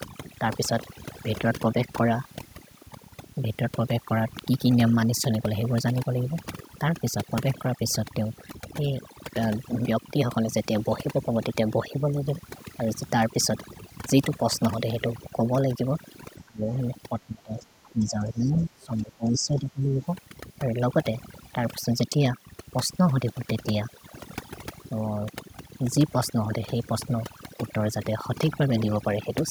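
Across the whole speech clip, overdone noise removal leaves the background near silent but sprinkled with twinkling specks. Bands near the estimated noise floor were cut too hard. A spectrogram shows isolated speckled dots and ragged, hollowed-out harmonics.

From 16.42 to 16.65 s the voice drops by roughly 25 dB, then from 17.09 to 20.01 s it dips by roughly 20 dB. The waveform envelope sags. This is likely speech suppressed in double talk by an echo canceller.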